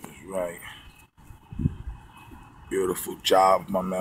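No technical faults can be heard anywhere in this clip, and the signal stays steady and intact throughout.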